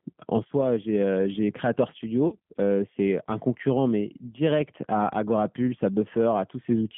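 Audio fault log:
throughout: G.729 codec, 8 kbit/s, plainly audible rough synthetic texture; spectrogram shows energy confined to roughly 150 Hz to 3.4 kHz, empty above, with smeared fine harmonic detail.
2.28 to 2.36 s: VoIP packet loss concealed by the speech codec; about 40 ms missing, fitting two lost packets. Decoder extrapolates from its last pitch and filter, giving a buzzy tone or coloured noise that fades; waveform shows decaying output.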